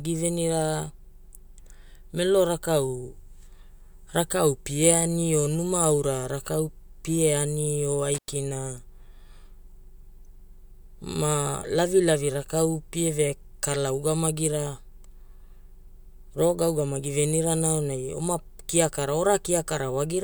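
It's a speech recording with one intermittent contact fault: right after "rakau pie ani o", the signal drops out from about 8.14 to 8.29 s, with the line fully open for roughly 100 ms. You get crackle as it breaks and again as it reconnects, and faint hiss in between. That's a loose cable or plug momentarily losing its connection, so the audio path briefly opens and closes.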